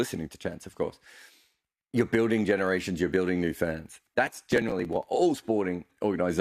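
From 4.27 to 5.03 s, processor overload crackle: roughly twenty buffers of about 3 ms each missed their deadlines and were skipped, producing gritty tearing across the speech.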